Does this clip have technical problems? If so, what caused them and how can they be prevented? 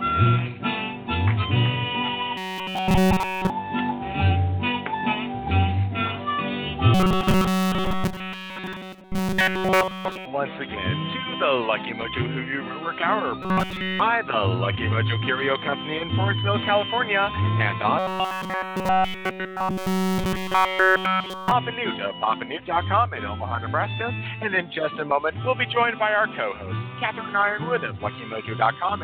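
Yes. Robotic sound from repeated short buffers at 2.37–3.50, 6.94–10.25, 13.43–14.00 and 17.99–21.51 s is a rigid 188 Hz buzz replacing essentially all the audio, likely from a roughly 5.3 ms buffer looping while fresh samples arrived too slowly. Larger playback buffers and a steadier audio thread or network path would keep fresh audio arriving in time.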